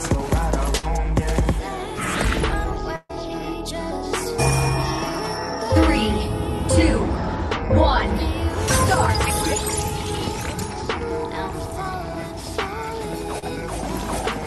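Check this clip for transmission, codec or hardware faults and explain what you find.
Three transmission faults are audible, all from lost packets.

Bursts of packet loss occur at 0.77–0.85 s and 2.96–3.13 s. About 60 ms and 140 ms of audio never arrived, and the receiver stretched the last sound and faded it, producing a held, decaying tone or hiss. In the second gap the fill runs out into about 40 ms of silence. On a spectrogram each gap shows as smeared, repeated bands that dim, then an abrupt jump where the audio resumes. A waveform shows a shrinking stretch with a flat section in the second gap.

Short concealed packet loss occurs at 13.39–13.44 s. Around 40 ms went missing and was patched by extending the preceding sound before blending back, giving a brief smear or wobble. A spectrogram shows a narrow, blurred vertical strip.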